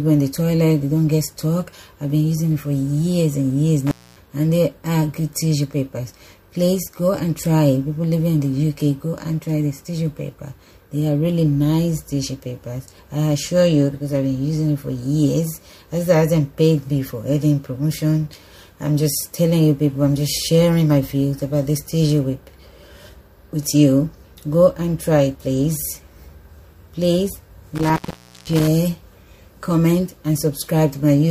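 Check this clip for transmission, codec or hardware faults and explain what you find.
Two dropouts from intermittent contact, at 3.87 to 4.20 s and 27.75 to 28.68 s. The sound crackles, then vanishes into faint hiss for about 0.24 s and 0.51 s. A loose cable or plug briefly breaks the signal path, scraping contacts at each edge.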